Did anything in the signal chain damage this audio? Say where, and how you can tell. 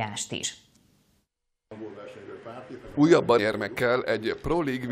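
Yes. Damaged data in the compressed stream, a codec and storage-stage fault, shows up at 0.43 s and 3.38 s as brief glitches. The decoder misreads corrupted frames and loses sync, leaving a short smeared vertical streak on a spectrogram and a jagged glitch in the waveform.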